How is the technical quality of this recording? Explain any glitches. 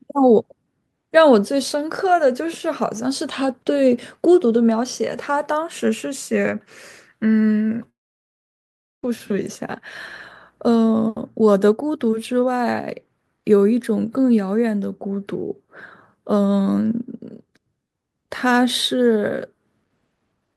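The recording has one clear interruption. A long network dropout runs from 7.89 s to 9.05 s. The speech stops abruptly, the last sound smears into a brief fading buzz, and then near-silence holds for about 1.1 s. Audio likely stopped arriving, so the receiver padded the gap, and the speech resumes with that stretch missing.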